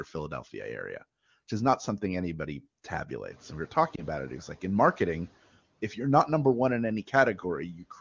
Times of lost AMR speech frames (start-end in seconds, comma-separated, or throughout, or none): 3.96-4.03